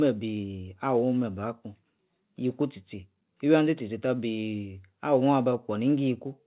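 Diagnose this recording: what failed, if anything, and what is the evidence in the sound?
Nothing failed in this recording.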